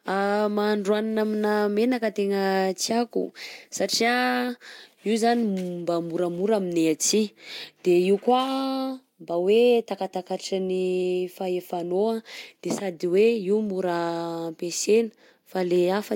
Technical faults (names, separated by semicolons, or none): none